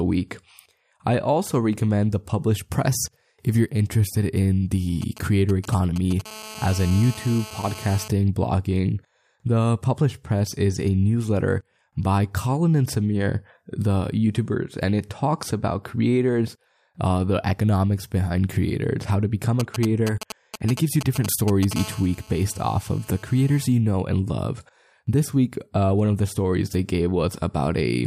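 From 5.02 to 6.21 s and again from 19.60 to 21.73 s, GSM signalling bursts from a nearby 2G phone are rectified by the audio circuit into galloping ticks and brief 217 Hz buzzes. The first set sits roughly 15 dB below the speech and the second roughly 10 dB below. A spectrogram shows clustered vertical stripes.

Each run passes straight into a steady GSM phone buzz, from 6.26 to 8.08 s at about 16 dB below the speech and from 21.76 to 23.66 s at about 21 dB below. The buzz is a raspy 217 Hz tone that shows as evenly spaced harmonic lines and regular waveform pulses.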